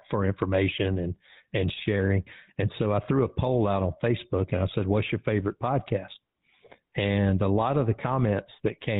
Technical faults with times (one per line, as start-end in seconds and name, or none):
0.00-8.99 GSM full-rate codec